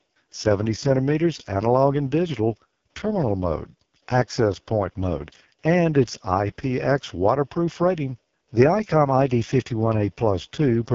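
From start to finish the speech has passed through the AMR wideband (HD Voice) codec at one of its lowest rates, which fits the 6.6 kbit/s mode. At that rate the vocal tract model has too few pulses to rebuild the voice faithfully, so every word comes out rough and raspy, with a buzzy, grainy edge. Nothing survives above about 7.4 kHz, and the top of the band is filled with synthetic hiss rather than real detail.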